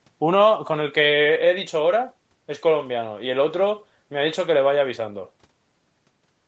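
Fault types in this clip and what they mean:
There are no fault types in this clip, so there is nothing to explain.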